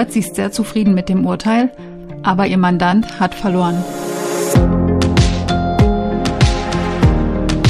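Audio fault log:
No faults detected in this clip.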